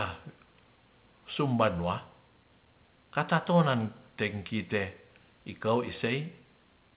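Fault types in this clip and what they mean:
Nothing in this speech clip stands out as a fault, so there's nothing to list here.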